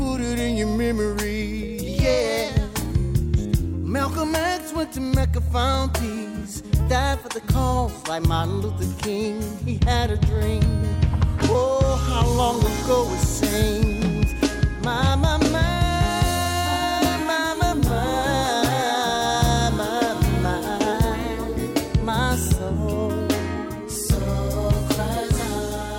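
At 1.88 to 2.49 s, 6.81 to 8.60 s and 20.93 to 22.78 s, the audio jumps about 6% fast, raising pitch by about a semitone, then snaps back. This is a drift correction step, likely a clock-matching resampler adjusting rate abruptly.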